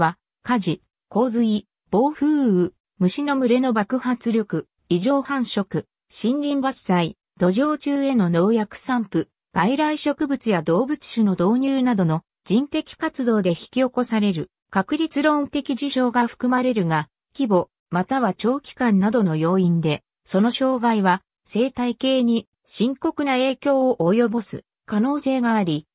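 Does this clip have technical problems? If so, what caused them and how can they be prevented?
No, this clip has no technical problems, so there is nothing to trace to a cause or to prevent.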